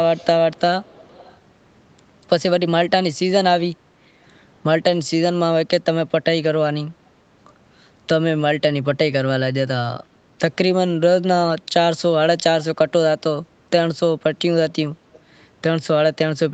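Echo leak at 0.17–0.26 s, 0.53–0.61 s, 0.83–1.37 s and 15.13–15.20 s: a faint copy of the speech trails the original by about 390 to 410 ms, well below it in level, likely because a loudspeaker's echo canceller let some microphone pickup return.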